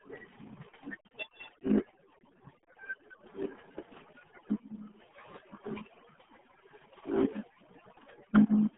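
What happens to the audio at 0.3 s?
At 0.3 s, as everywhere in the clip, two faults are present. The first is overdone noise removal. An aggressive noise reducer is cutting individual frequency bands whenever they approach its noise estimate, and the quieter parts of the speech are cut with them. The background drops and breaks up into twinkling specks. A spectrogram shows scattered isolated dots in the gaps and a patchy, hollowed texture across the speech.

The second is the RealAudio 14.4 codec, RealAudio 1. The speech sits in a telephone-like band of roughly 150 Hz to 3.4 kHz, with nothing above 3.8 kHz, and the heavy coding damage fits an 8 kbit/s codec. It sounds muffled and gargly. On a spectrogram everything above that ceiling is a hard empty band.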